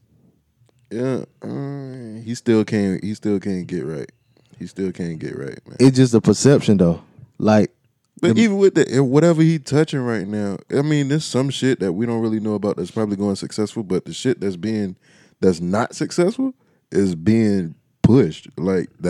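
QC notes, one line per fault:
5.83–6.82 s: hard clipping. The speech is pushed about 4 dB beyond what a stage in the chain can pass. Its peaks are cut flat for about a second. The flat tops add harmonics high in the spectrum. That is heard as crackle and grit on the louder syllables.
7.48–7.57 s: hard clipping again, milder, with about 2 dB of overdrive. Only a short burst of peaks is flattened, so it sounds like a brief crackle.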